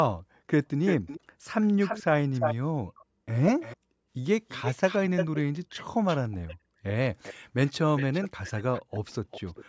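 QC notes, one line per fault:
0.86–1.2 s, 1.63–2.55 s, 2.98–3.05 s, 3.6–3.77 s, 4.48–5.4 s, 6.07–6.56 s, 7.24–7.34 s, 7.67–9.65 s, echo leak: the far end is likely on a loudspeaker whose echo canceller lets part of the returned signal through, so a delayed copy of the speech trails the original. The copy lags by 338 ms and then by 402 ms from 7.24 s onward. It is nearly as loud as the speech at 0.86, 1.63 and 4.48 s, faint at 2.98 s, and moderate elsewhere.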